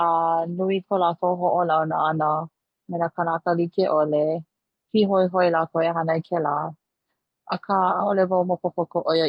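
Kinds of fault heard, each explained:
Nothing stood out on listening to this speech clip.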